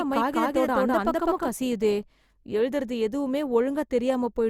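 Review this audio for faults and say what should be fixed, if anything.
From the start to 1.48 s the speech is doubled: a second, equally loud copy trails by around a fifth of a second with no room colour, then cuts off abruptly. This doubled audio track likely comes from the same signal being captured twice through paths of different speed. To prevent it, route the source through a single capture path and check that no duplicate input stays armed.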